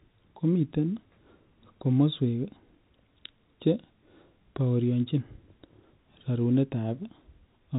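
No technical faults are audible.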